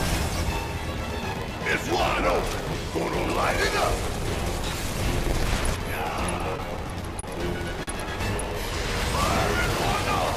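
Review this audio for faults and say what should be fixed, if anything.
A block size mismatch (padded) runs throughout: an 86.1 Hz buzz and playback at 0.938 speed, which fits shorter blocks zero-padded into 512-sample reads.

Repeated stalls (stutter) from 6.38 to 7.26 s: the jitter buffer emptied five times, concealing 72 ms in total with gaps up to 28 ms, so the sound drags.

A short stall from a late packet at 7.83–7.90 s holds the sound 40 ms after a 40 ms delay jump, with nothing lost.

Match the producer and consumer block sizes, and size the jitter buffer adaptively to absorb delay changes of at least 40 ms.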